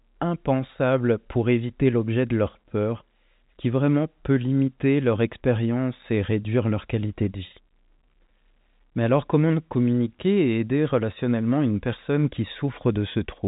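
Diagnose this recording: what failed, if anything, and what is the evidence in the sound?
Nothing failed: the speech carries the narrow telephone band of G.711 telephone coding, with nothing above about 3.8 kHz, and no fault can be heard at any stage.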